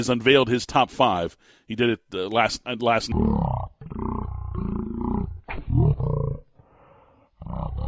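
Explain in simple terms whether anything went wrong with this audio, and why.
Wrong sample rate from 3.12 s onward: replayed at a third of its recorded rate, the speech drops to one third speed and 19 semitones lower.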